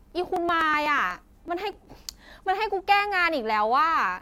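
From 0.12 s to 1.85 s the speech carries periodic USB or driver dropouts. Roughly every 0.124 s about a millisecond of audio is skipped, so there are around fifteen evenly spaced ticks. The waveform shows small discontinuities, and the spectrogram shows thin vertical broadband lines at a regular spacing.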